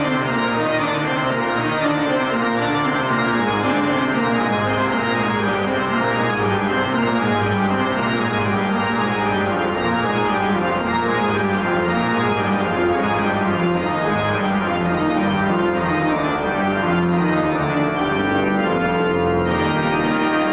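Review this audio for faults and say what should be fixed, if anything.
Gain pumping runs through the whole clip. The gain swings by roughly 5 dB, so loud and quiet parts end up squashed together. The likely cause is mic gain set far too high, with a fast limiter or compressor clamping down on every peak. To prevent it, lower the input gain so the limiter only catches the occasional peak. The lack of anything above 4 kHz comes from the narrowband call path, consistent with G.711, and isn't a fault.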